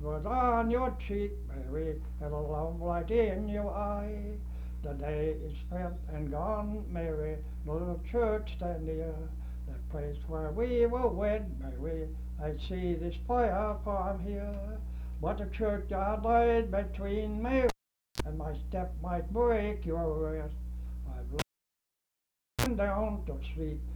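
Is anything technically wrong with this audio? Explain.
Yes. The cable is pulled and plugged in twice, at 17.69 to 18.22 s and 21.39 to 22.66 s. Each break opens with a pop and drops to near silence for 479 ms and then 1.22 s. A brief 60 Hz mains buzz of about 40 ms and 49 ms follows as the connector tip makes contact, and a second pop marks the signal's return.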